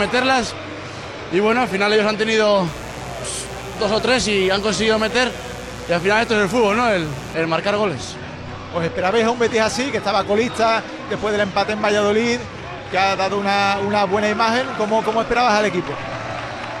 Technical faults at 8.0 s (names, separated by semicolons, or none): none